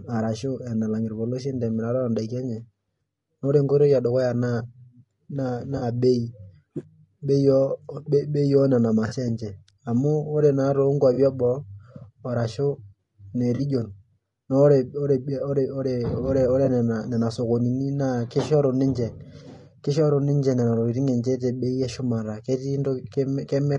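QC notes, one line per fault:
Throughout: low-delay AAC compression. The speech sounds rough and grainy, with noise filling the gaps between pitch harmonics and a thin, synthetic-sounding top band. This is likely AAC-ELD at a rate that points to around 32 kb/s, where too few bits are left to code the harmonics cleanly. On a spectrogram the harmonic stripes look blurred and smeared into noise, and the upper band is patchy and blocky rather than showing natural fine detail.
5.77–5.82 s, 9.07–9.14 s, 11.13–11.18 s, 13.55–13.61 s, 16.65–16.69 s: AAC frame loss with concealment. Each gap lasts about 40 ms, except the last at about 20 ms, which fits one or two lost frames. The decoder rebuilds each gap from the previous good spectrum, so it sounds like a brief smeared, noisy or phasey blip. On a spectrogram each gap shows as a short, smeared block. On the waveform the envelope goes flat, or turns noise-like, for the length of each gap.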